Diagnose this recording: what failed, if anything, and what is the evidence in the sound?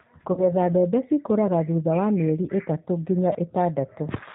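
The whole recording passed through the G.729 codec at 8 kbit/s, the G.729A variant, and the coding damage is plainly audible. Nothing above 4 kHz survives, so the speech sounds band-limited and dull. Each 10 ms frame is rebuilt from a vocal tract filter, a pitch predictor and a sparse set of pulses rather than the original waveform, which gives the speech its rough, slightly synthetic texture.

At the network stage there is VoIP packet loss concealed by the speech codec, from 0.33 s to 0.45 s. About 40 ms of audio went missing, which fits two lost 20 ms packets. The decoder filled the gap by extrapolating from its last pitch and filter, so the sound stretches into a fading buzzy tone or coloured noise. Each frame builds on the one before, so the speech stays weakened until about 0.45 s, after packets resume.

At 3.33 s to 3.35 s a repeated buffer shows up at the driver or buffer stage. 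New audio did not arrive in time, so the device replayed the last block several times in a row. The short, hard-joined repetitions sound like a click or brief buzz, which fits a buffer of about 5 ms. Roughly 20 ms of real audio was lost and replaced by the repeats.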